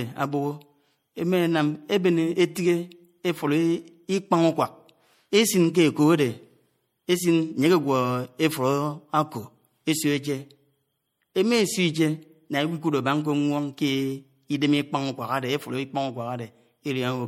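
From start to end, the speech carries plainly audible MP3 compression damage, likely from encoding at a starved bitrate that fits about 64 kbps. S sounds turn watery and chirpy as weak frequency lines flicker between frames, which sets it apart from a plain low-pass filter's clean, steady dullness.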